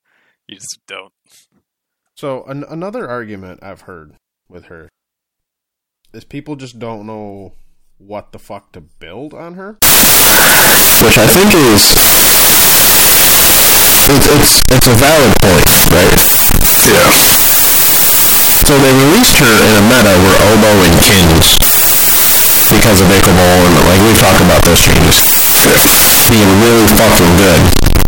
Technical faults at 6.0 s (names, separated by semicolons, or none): none